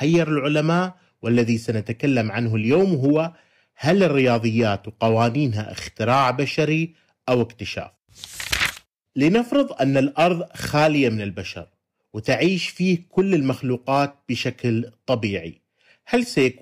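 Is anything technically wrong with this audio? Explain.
Yes. Hard clipping runs through the whole speech clip. The signal is driven about 7 dB past what one stage can pass, so peaks are sliced flat. Only a small share of samples, around one or two percent, are cut. The flat tops add high harmonics, heard as crackle on louder syllables.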